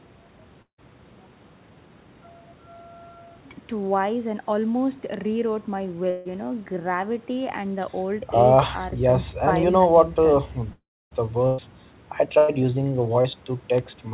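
Speech, band-limited to about 4 kHz, which fits a narrowband G.711 call codec. At 0.62–0.80 s, 6.10–6.27 s and 10.73–11.13 s the last sound is stretched into a fading buzz or hiss. At the first and last of these it then drops to silence for about 0.1 s and 0.28 s, pointing to a likely long network dropout. The length and the lapse into silence set these apart from the shorter bursts of packet loss at 11.47–11.60 s and 12.38–12.50 s. In those, a held buzz or fading hiss of roughly 0.1 s bridges the missing audio without going silent. At 13.22 s a short concealed packet loss leaves a brief smear of about 20 ms, too short to fade. Bit error spikes at 5.14 s and 13.78 s are single sharp broadband ticks, with nothing smeared or missing, unlike the concealment events.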